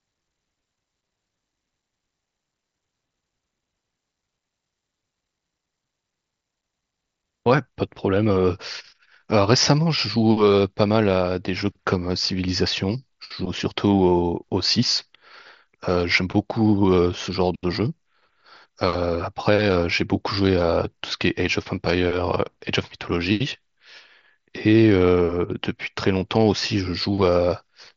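No technical faults occur at any point in the speech.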